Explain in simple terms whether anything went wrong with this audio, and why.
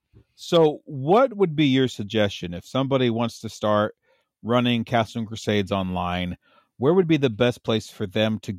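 Nothing went wrong here; the speech runs steady from beginning to end, with nothing in the sound pointing to a problem anywhere in the recording or playback chain.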